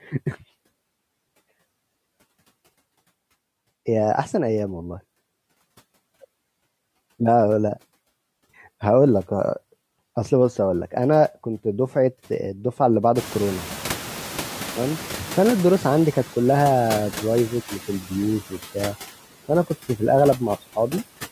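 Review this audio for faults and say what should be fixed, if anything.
Noise suppressor artifacts run through the whole recording. The suppressor pulls down about 15 dB of steady background, frame by frame. The background sinks in the gaps and swells back under the speech. Prevention: use a gentler suppression depth or a smoother gain curve so the residue stays steady.

The noise suppressor is catching up from 13.15 to 16.12 s. The room noise, a real part of the recording, jumps by about 24 dB at around 13 s. The suppressor's noise estimate lags behind. At first it removes only about 5 dB, so the louder background comes through. It takes roughly 3 s to adapt before the noise settles down. Prevention: let the noise estimator track sudden level rises faster.

Speech is cut by the noise suppressor between 17.88 and 18.12 s. The suppressor mistakes part of the speech for background and turns it down with the noise. 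The deepest drop is about 9 dB. The affected sound adds up to roughly a tenth of a second. It sounds swallowed and faint. Prevention: protect speech bands with better voice detection or a floor on how far gain can fall.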